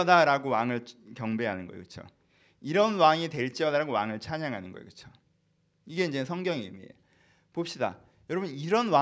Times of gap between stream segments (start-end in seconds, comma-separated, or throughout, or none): none